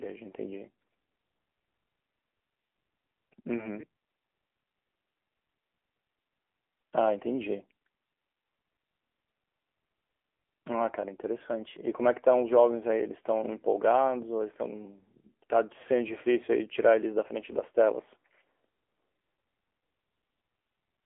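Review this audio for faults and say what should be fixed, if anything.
Across the whole speech clip the voice sounds thin, boxed-in and plainly buzzy and synthetic, with nothing audible above about 3.6 kHz. The band is limited to roughly 300 Hz to 3.4 kHz. This is AMR narrowband mobile codec damage. The codec samples at 8 kHz and rebuilds speech from a vocal-tract model excited by sparse pulses, and the plainly audible coarseness fits a low mode near 8 kbps. To fix it, record or transfer over a wideband or lossless path instead of a narrowband mobile call.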